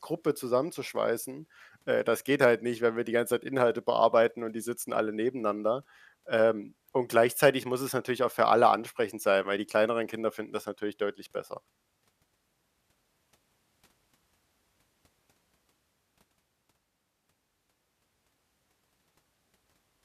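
No technical faults can be heard anywhere in the recording; the signal stays continuous and stable throughout.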